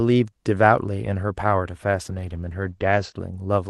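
From 1.9 s to 3.21 s there is a call bitrate drop. The call's bandwidth estimate falls and the Opus encoder is pushed to spend far fewer bits, consistent with a fall from about 32 kbps to 12 kbps. Audio bandwidth narrows from 12 kHz to 8 kHz, so the speech loses its upper detail and turns muffled and rough, with the worst stretch lasting about 1.13 s before the bitrate recovers.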